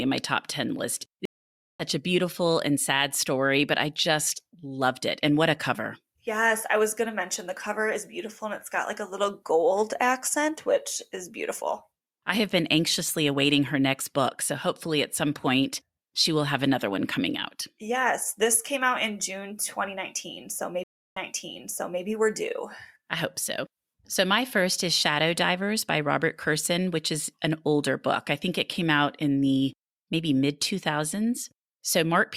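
At 1.25 s the speech drops out for about 0.54 s, a stream reconnect: the connection failed, the player went quiet, then reconnected and started a fresh decoder mid-stream. It resumes at "a beautiful and sad" roughly a third of a second further on, so a short stretch is skipped. A second reconnect at 20.84 s (to 22.02 s) gives about 0.33 s of silence, then resumes at "we're due I hope" 0.86 s earlier, repeating material resent after reconnection.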